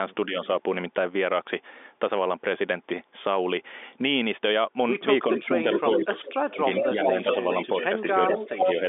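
A telephone speech recording, carried on a G.711 line that passes nothing above 3.8 kHz, with two echo-canceller faults. From 5.36 s to the end, the far end's canceller was likely leaving part of its loudspeaker pickup in place, so an echo leak returns the speech about 405 ms late, only a few dB below the direct voice, as a distinct delayed copy. When both sides talk at once, the canceller likely mistakes the talker for echo, and speech suppressed in double talk follows: a slight dip at 0.26 to 0.38 s, a deep one of roughly 25 dB across stretches between 5.39 and 7.28 s, and a moderate one of around 10 dB between 7.84 and 8.82 s.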